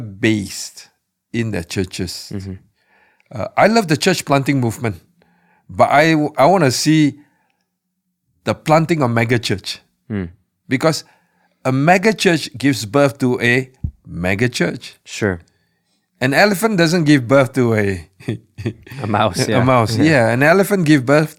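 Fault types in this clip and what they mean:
No faults detected in the speech recording.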